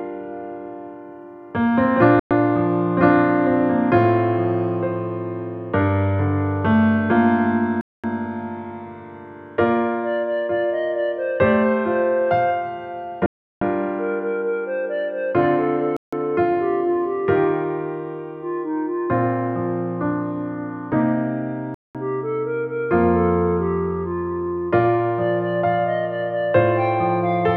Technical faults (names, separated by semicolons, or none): Bluetooth stall